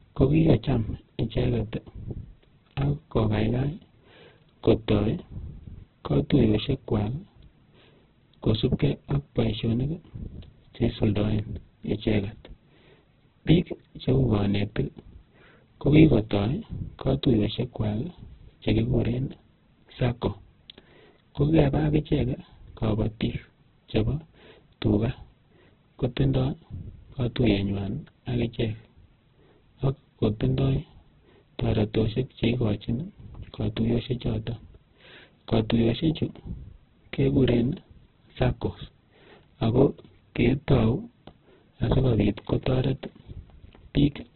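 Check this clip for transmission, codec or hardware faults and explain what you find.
One fault runs through the whole clip: heavy Opus compression. The likely cause is an encoder starved of bits, with damage that points to a rate around 8 kbps in the music (CELT) mode at narrowband. Each band's energy is kept, but the missing detail is filled with folded copies of lower bands or with noise, so the speech sounds rough, grainy and muffled. Nothing is left above 4.2 kHz.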